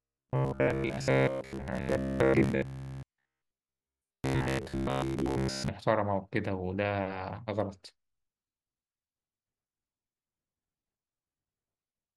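From 0.02 s to about 5.68 s the speech turns into a rigid, metallic buzz at 66.7 Hz. This is robotic sound from repeated short buffers: audio likely arrived too seldom, so for most of that stretch the player looped the last fragment, about 15 ms long, skipping real audio. Unlike dropouts, which leave silent gaps, the sound never stops; it keeps a fixed, mechanical pitch while still loosely following the speech.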